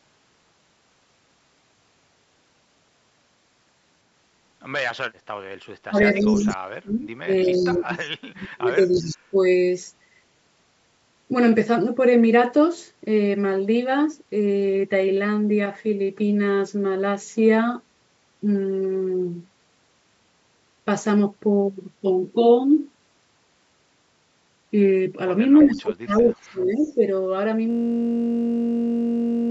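This is a speech recording with three kinds of fault. The first is speech suppressed in double talk, from 5.87 to 9.42 s and again from 25.63 to 27.01 s. The voice dips by up to about 30 dB and drops out in pieces, for roughly three seconds in the first stretch and one second in the second. Both ends were likely talking at once. The echo canceller then could not tell local speech from loudspeaker echo, so it turned both down. The second fault is an echo leak. A delayed copy of the voice comes through at 5.99 to 6.55 s, 7.46 to 8.09 s, 8.90 to 9.17 s, 25.58 to 26.29 s and 26.82 to 26.94 s. It trails the original by 332 ms. It sits about 10 to 35 dB below the main speech, and is loudest near 25.6 s. This likely means the far end was on a loudspeaker and its canceller let part of the pickup return down the line. The third fault is a system hang loop from 27.71 s to the end. One 21.33 ms slice of audio repeats exactly, about 85 times. 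That produces a steady buzz at 46.9 Hz, which fits a 1024-sample ring buffer cycling while the machine was frozen. The missing content above 8 kHz comes from the call's normal microphone processing.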